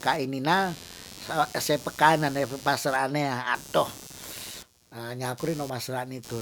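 A buzzing, chirping layer of rapid pulses, around a hundred a second and roughly 20 dB below the speech, runs through the whole clip, changing with something other than the talking itself. This is computer activity noise: shifting load on the processor, graphics card or mouse disturbs the ground shared with the audio circuit, so the machine's electrical activity leaks into the recording as interference.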